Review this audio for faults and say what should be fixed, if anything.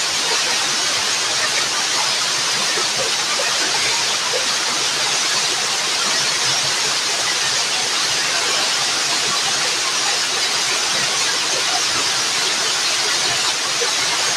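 Nothing here needs fixing.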